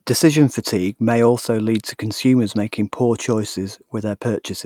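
No technical faults can be heard anywhere here.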